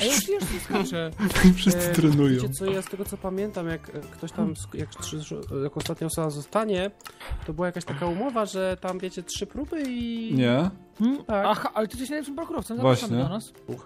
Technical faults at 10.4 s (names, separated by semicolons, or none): none